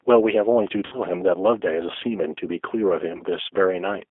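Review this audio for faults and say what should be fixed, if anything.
G.729 codec, throughout: the speech is confined to roughly 300 Hz to 3.5 kHz and sounds plainly rough and synthetic, because each 10 ms frame is rebuilt from a vocal tract filter, pitch predictor and a few pulses, which fits an 8 kbit/s G.729A stream. Carrying the call on a wideband codec such as G.722 or Opus would avoid this.

VoIP packet loss concealed by the speech codec, at 0.86 to 1.0 s and 3.17 to 3.24 s: the decoder filled gaps of 60 ms and 20 ms (fitting three packets and one) by stretching its last pitch and filter into a fading buzzy tone or coloured noise, and the voice stays weakened briefly afterward. A jitter buffer with forward error correction or packet redundancy would prevent this.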